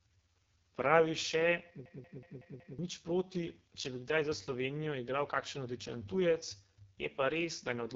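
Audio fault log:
throughout, AMR wideband (HD Voice) codec: the speech is heavily damaged, rough and raspy, with the coarse buzzy texture of AMR-WB running at one of its lowest rates, 6.6 kbit/s. At that rate the pulse-driven vocal tract model has too few bits to follow the voice faithfully, so detail is smeared into grit. Above 6.4 kHz there is only shaped noise standing in for real content, and nothing at all above 7.5 kHz.
1.86 to 2.79 s, system hang loop: a machine-gun stutter. The same 186 ms scrap of audio plays five times in a row, about 5.4 repeats per second, because the system froze while the sound hardware kept cycling through the same stale ring buffer. A loop that length points to an 8192-sample buffer. Roughly a second of the real speech is gone, replaced by the repeats, and the clip picks up again once the stall clears.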